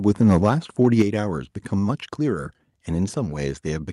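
From 0.2 to 0.48 s, and again from 0.84 to 1.02 s, the loudest speech peaks turn harsh and crackly. This is microphone overload, likely from input volume driving the converter about 4 dB and then about 3 dB past its ceiling, with a small share of samples flattened. Unlike a limiter's smooth squashing, it adds grit.

Right after that second burst, at 1.02 s, voice and background fall together by about 6 dB, then by about 2 dB at 2.04 s. This is the microphone volume stepped down, likely by call software reacting to the overload. The drops are instant steps rather than a gradual fade.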